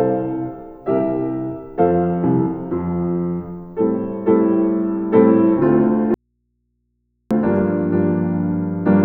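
The signal feed was likely interrupted while the downstream path stayed live, producing an audio dropout to a faint residue: from 6.14 s to 7.31 s, about 1.16 s, the sound cuts out abruptly, leaving only mains hum roughly 50 dB below the normal level.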